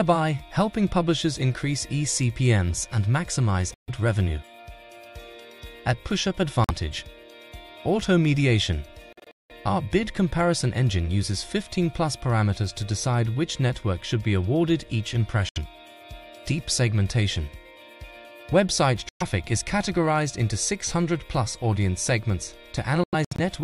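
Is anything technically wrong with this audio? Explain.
Yes, there are six short holes where the audio cuts to silence, at 3.74–3.90 s, 6.64–6.71 s, 9.13–9.52 s (broken into several gaps), 15.49–15.58 s, 19.09–19.22 s and 23.04–23.40 s (also several gaps). This is likely a Bluetooth dropout: late packets were discarded, so each gap has abrupt edges or a brief fade of a few milliseconds and the sound picks up further along, as if it had kept playing.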